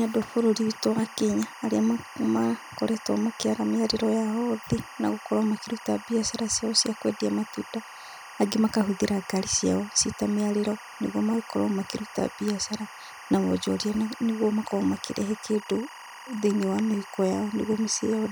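Timecode bleed runs throughout this speech recording, a steady chirping warble sitting roughly 20 dB below the voice. Linear timecode from an adjacent track or cable is leaking in, its square wave flipping between tones around 1 and 2 kHz in a pattern repeating at 23.976 frames per second.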